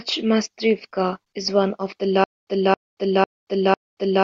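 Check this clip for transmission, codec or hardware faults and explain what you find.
A playback stall shows up as a stutter with silent gaps from 2.24 s to the end of the speech. Just after "is one of the", a fragment of about 0.27 s repeats four times, each followed by about 0.23 s of digital silence, on a steady 0.5 s cycle. The likely cause is a player or stream stalling, replaying its last buffered fragment at each retry and then running dry. The audio due in that span never arrives.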